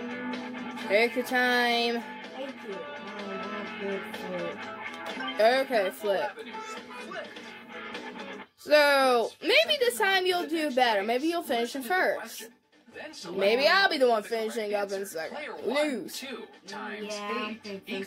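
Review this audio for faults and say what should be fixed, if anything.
No faults heard here; nothing needs fixing.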